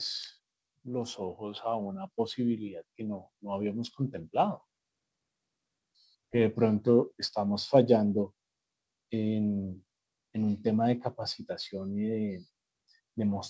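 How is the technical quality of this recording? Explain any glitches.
The recording has one clear glitch: an automatic gain rise early on. From 0.82 s to 4.37 s, the level climbs steadily by about 11 dB. The automatic gain control judged the input too quiet. It raised its gain in small steps rather than all at once. Because it amplifies everything, the speech and the background swell together. The rise takes about three and a half seconds, so it sounds like a slow fade-up. The audio also came through a call path, and nothing is present above 8 kHz. That fits a wideband call codec such as G.722.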